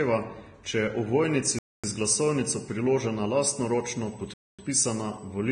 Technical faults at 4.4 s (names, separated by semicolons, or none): Vorbis compression; USB whine; gap between chunks